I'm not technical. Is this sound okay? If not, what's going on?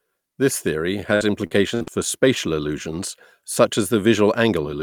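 No. Between about 1.15 and 1.89 seconds, the connection carrying this speech kept dropping or delaying small chunks of audio, which is called repeated packet loss. Each time a chunk went missing, the system papered over the hole by stretching out the last bit of sound it had, up to 57 ms at a time and about 0.19 s in all, roughly a quarter of that stretch. To the ear, the speech turns choppy and robotic there, with bits missing.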